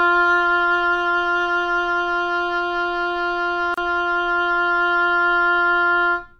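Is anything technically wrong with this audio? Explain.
Yes. A gap at a join of encoded pieces opens from 3.74 to 3.78 s. Separately encoded segments were joined without trimming each encoder's start-up delay and end padding, leaving a gap of about 33 ms whose edges are smeared, so the silent part is shorter, before the sound resumes where it stopped.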